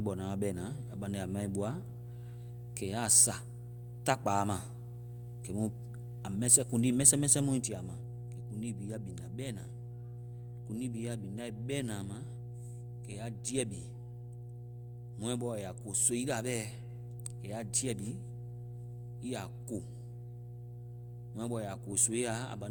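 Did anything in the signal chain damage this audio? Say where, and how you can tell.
Yes. Mains hum got into the analogue wiring, most likely through a ground loop or a nearby transformer coupling the power line into the signal. A steady 60 Hz tone runs for the whole clip, only about 10 dB below the speech, so it is clearly audible. On a spectrogram it appears as an unbroken horizontal line at 60 Hz. On the waveform, the gaps between phrases are filled with a regular low-frequency ripple instead of flat silence.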